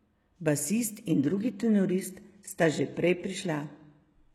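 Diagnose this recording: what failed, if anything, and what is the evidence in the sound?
At 1.07 s the speech drops abruptly into an adaptive stream at a lower bitrate, a network-driven switch lasting to the end. Nothing remains above 12.3 kHz, with thicker codec artefacts, consistent with a low-rate HE-AAC stream. Unlike a dropout, there is no gap.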